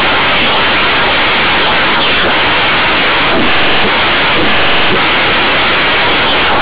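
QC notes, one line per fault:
Throughout: companded audio read as linear. The mu-law telephone bytes are being played as plain 8-bit samples without expansion, so every sign change throws the output across roughly half its range and quiet passages come out as loud as peaks. The speech turns harsh and buzzy with heavy noise filling the pauses, while the band still stops near 4 kHz, which fits 8 kHz G.711 telephone coding underneath the misreading.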